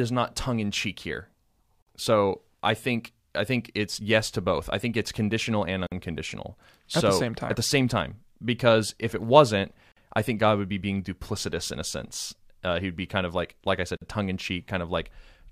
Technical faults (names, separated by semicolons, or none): gap at a join of encoded pieces